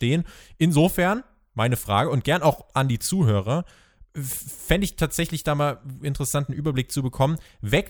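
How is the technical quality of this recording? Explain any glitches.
Nothing stood out on listening to this recording, so there are no glitches to explain.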